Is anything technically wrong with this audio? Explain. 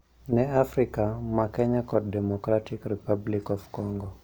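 Yes. From 1.06 s to the end at 4.24 s the speech carries periodic clock jitter: the converter's sampling clock is wobbled at around 1 kHz, so each component sprouts sidebands spaced about 1 kHz above and below it. That gives a rough, metallic edge, strongest on high-frequency content and gone in pauses. A spectrogram shows parallel copies of the harmonics at that offset.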